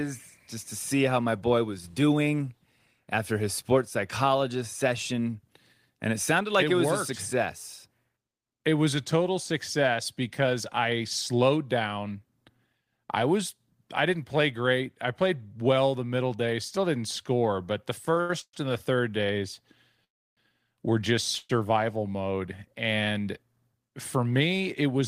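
From 18.05 to 18.54 s, after "didn't score but the", packets kept arriving late and the jitter buffer repeatedly ran dry. The result is repeated stalls (stutter): four held gaps, the longest 120 ms, filling about half that stretch before "and the third days".

Two call audio freezes follow, each likely from packets held up in transit. At 20.04 to 20.38 s, after "and the third days", the sound halts for 325 ms, nearly all of it silence. At 21.38 to 21.50 s, after "were just", a brief 116 ms hold buzzes before resuming.

From 23.48 to 24.82 s, a jitter buffer speed-up trims roughly a tenth of a second of excess buffered audio in small pitch-period cuts. The sound runs 7% faster at unchanged pitch and feels hurried.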